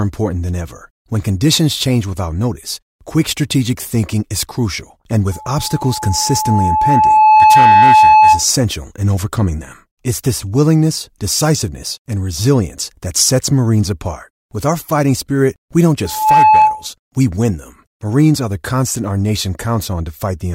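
Speech with loudspeaker feedback squeal: an 861 Hz tone climbing to about 10 dB above the speech at 5.32–8.46 s, after "thinking is crucial and," and at 16.04–16.87 s, after "fighting spirit we don't." Unlike a steady hum, it swells by itself as the microphone re-amplifies the loudspeaker.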